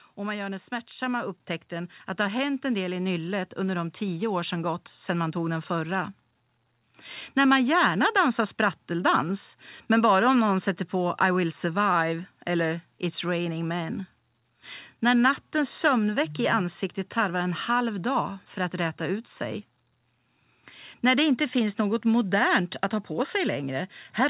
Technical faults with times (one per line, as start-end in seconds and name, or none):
2.04 microphone volume stepped up